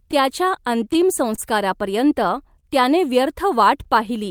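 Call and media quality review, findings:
Clock drift between sender and receiver, throughout the speech. Sender clock runs about 2% slow. Jitter buffer keeps draining, forcing the receiver to repeat short segments. Irregular small timing hiccups across the whole clip. Waveform shows brief duplicated cycles at uneven spacing. Spectrogram shows faint vertical seams where harmonic tracks jump slightly in phase.

Short stall from a late packet, at 1.35–1.40 s and 2.60–2.65 s. Jitter buffer ran empty. Receiver stretched the last sound for about 26 ms and 29 ms, then resumed where it left off with nothing lost. Playout delay grew by the same amounts. Waveform shows a short repeated, slightly flattened stretch. Spectrogram shows harmonics held horizontally with a faint buzz band or energy dip.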